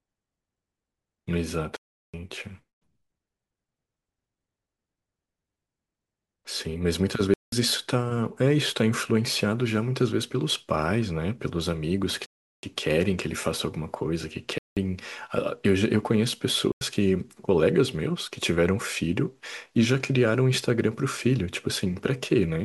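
Five times the speech drops to a block of digital silence: 1.77–2.14 s, 7.34–7.52 s, 12.26–12.63 s, 14.58–14.77 s and 16.72–16.81 s. Output buffers likely went unfilled, leaving holes of 371.5, 185.8 and 92.9 ms, which fits 16384-, 8192- and 4096-sample buffers.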